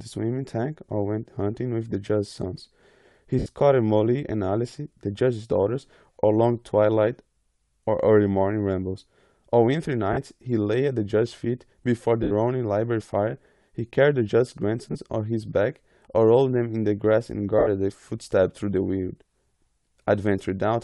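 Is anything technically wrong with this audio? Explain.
Yes, two kinds of fault are audible in this speech.

Bluetooth LC3 compression, throughout: the speech carries a grainy, breathy edge, most likely from LC3 coding. At this rate, which fits about 48 kbps with 10 ms frames, the codec discards upper-band detail and substitutes shaped noise.

Lost LE Audio frames, at 3.39 s (70 ms), 10.13 s (40 ms), 12.23 s (80 ms), 14.92 s (30 ms) and 17.59 s (80 ms): the decoder repeats the last spectrum with scrambled signs and fades it. Each gap becomes a brief noisy smear before the speech resumes.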